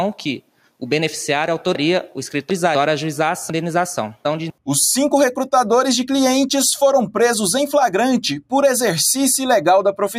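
From 0.41 to 0.81 s the noise suppressor misjudges the sound as noise and pulls it down, by about 12 dB at its deepest, for around a fifth of a second in total. Sustained and decaying parts sink or end early, while sharp onsets largely survive.

Two stretches of chunks out of order follow, at 1.75 to 2.75 s and 3.5 to 4.5 s. In each, a 250 ms chunk plays three chunks late, after material meant to follow it. The passage sounds jumbled.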